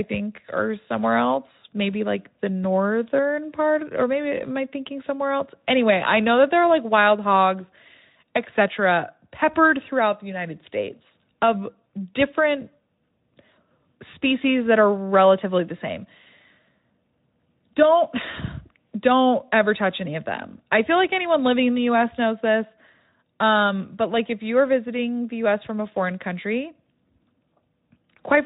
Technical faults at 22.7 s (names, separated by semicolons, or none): none